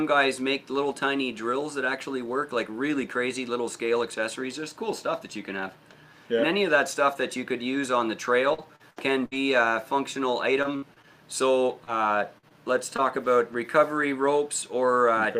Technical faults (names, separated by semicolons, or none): repeated packet loss (robotic sound); scattered short gaps